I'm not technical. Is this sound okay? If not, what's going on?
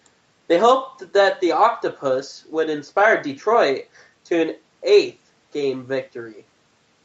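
Yes, nothing is technically wrong with this recording; it has only gone through the normal microphone processing of a call, which trims away the very deepest bass as it is meant to.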